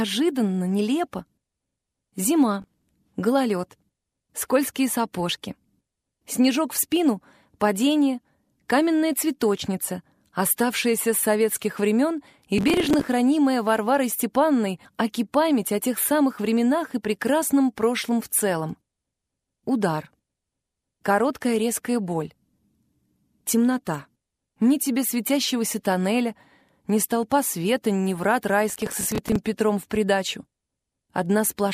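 Processor overload crackle occurs at 2.62–2.89 s, 12.58–13.08 s and 28.70–29.36 s. Short buffers of around 5 ms miss their deadlines in runs, each replaying stale audio with hard edges, giving bursts of gritty tearing that stop once the load clears.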